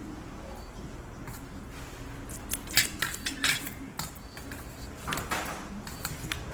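Throughout, the audio was likely squeezed by Opus compression in its music mode at a very low rate, around 16 kbps, leaving tones plainly grainy, rough and noisy across the full band.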